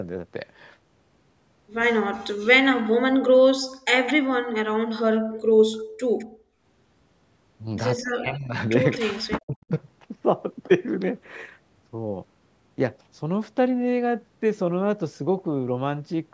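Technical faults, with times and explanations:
2.12–2.33 s, 4.47–5.84 s, 8.04–9.71 s: speech suppressed in double talk. The speech dips by up to roughly 40 dB in short pieces while the far side talks. The canceller likely could not separate the two, so this is not a steady fade.
2.72–4.13 s, 6.18–6.25 s, 7.97–8.97 s: echo leak. A copy of the speech returns about 208 ms late, likely from residual loudspeaker pickup. It sits roughly 15 dB down at 2.72 s and 7.97 s, and near 30 dB down at 6.18 s. It is an added delayed copy, not lost speech.
3.66–6.61 s: background gated by the echo canceller. The room sound drops by about 33 dB in brief spells totalling under a second while the loudspeaker plays. It returns when the canceller releases.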